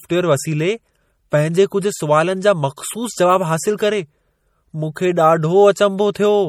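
Throughout the speech there is a watery, swirly quality with metallic chirping on sibilants, most likely from MP3 compression at a bitrate around 48 kbps. Weak frequency lines drop in and out between frames, showing on a spectrogram as flickering holes and patchy blocks below a band edge near 20.1 kHz.

At 2.76 s and again at 6.13 s, pre-echo appears: a brief hiss spreading about 12 ms and 18 ms ahead of sharp onsets, because quantisation noise fills the whole block. On the waveform, noise precedes each attack, which sounds softened.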